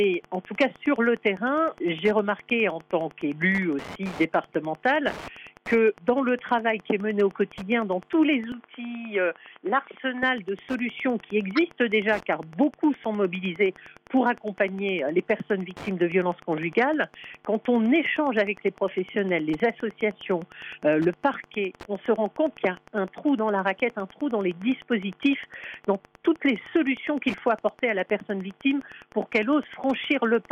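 Throughout the recording, Wi-Fi interference is present: a nearby radio's transmissions are being picked up and rectified by the audio circuit. Its beacon repeats every 102.4 ms, so a steady ticking runs under the sound about ten times a second, sitting roughly 25 dB below the signal. Between ticks there are rougher, irregular rasps, which fit bursts of data traffic from the same radio.

From 8.52 s to 10.23 s, the sound changes character abruptly, and the likely cause is that the input switched to a poorer device partway through the recording. Nothing above 3.8 kHz survives in this stretch, so the sound turns dull and boxy. The level drops by around 5 dB, and a faint new noise floor appears far below the signal. There is no gap at the switch, and the sound simply changes from one moment to the next.

At 11.56 s to 11.59 s, a corrupt frame was decoded: the compressed data was damaged, but the decoder played it anyway. 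Misread values put energy at the wrong frequencies, producing a short chirp-like blip that peaks at around −15 dBFS. Its length, about 35 ms, fits damage spanning a couple of frames.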